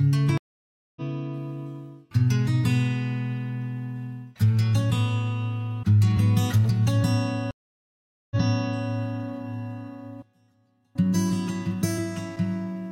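Two stream reconnects occur. At 0.38 s the sound drops out for 586 ms, then resumes roughly 0.7 s further on, as a fresh decoder picks up a live feed. At 7.51 s it falls silent for 798 ms and restarts 557 ms earlier, replaying a short resent stretch. Each restart enters softly.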